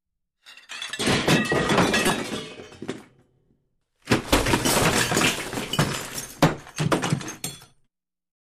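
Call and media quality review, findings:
Brief glitch at 2.07–2.10 s, about 34 ms. Probable component: decoder. Corrupt frame decoded: flipped bits, likely across about two compressed frames, were played anyway. Misread codes put energy at wrong frequencies. Error peaks around -10 dBFS.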